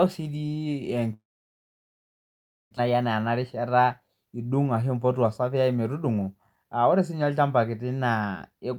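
From 1.13 s to 2.79 s the speech breaks off in what is likely a long network dropout. The last sound is briefly stretched into a fading buzz, then about 1.5 s of near silence follows before speech resumes with about 1.4 s of it simply gone. The receiver's delay appears to shift by roughly 200 ms across the gap. On a spectrogram this shows as a short smeared tail of the preceding harmonics dissolving into an almost empty band. The waveform drops to a flat line until the signal abruptly returns.

Two jitter buffer speed-ups follow. From 2.87 s to 4.09 s the receiver trims short pitch-period slices over and over, playing the speech about 10% fast and discarding around 150 ms. From 4.75 s to 5.57 s it does the same at about 9% fast, shedding around 70 ms. Pitch stays put, but the speech sounds hurried. A spectrogram keeps the same harmonic spacing while the syllables are squeezed closer together, and the waveform shows voiced stretches with repeated cycles cut out.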